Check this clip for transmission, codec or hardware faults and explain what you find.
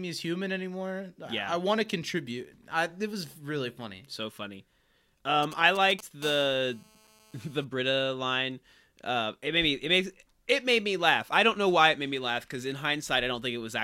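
Two kinds of radio-frequency interference from a nearby 2G mobile phone appear in this speech clip, one directly after the other.

From 5.43 to 6.24 s there are GSM signalling bursts: a galloping dit-dit-dit of short buzzes, fairly prominent at roughly 15 dB below the speech. The phone is exchanging brief groups of transmissions with the network, and the audio circuitry rectifies each radio pulse into a click. Within each group the pulses repeat at 217 Hz. What sets this apart from a continuous buzz is the broken, rhythmic grouping. The interference keeps stopping and restarting rather than holding a steady tone.

From 6.24 to 7.65 s it becomes a GSM phone buzz. This is a hard, raspy, harmonic-rich drone at 217 Hz, about 23 dB below the speech. The phone has moved into a call and now transmits its bursts without a break, so the rectified pulse train becomes an unbroken buzz that has nothing to do with the speech. 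Unlike mains hum at 50 or 60 Hz, its fundamental is 217 Hz and its harsh, buzzy texture comes from those sharp pulses.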